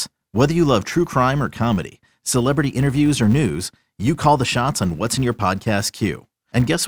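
A speech recording carrying a filter restarted on every block throughout, heard as a fine 200 Hz buzz riding on the sound. Each processing block starts the filter from silence, so every block boundary opens with a small transient, and a 200 Hz repetition points to blocks 5 ms long. Unlike mains hum or an added steady tone, this buzz rises and falls with the signal's level and fades as the level drops.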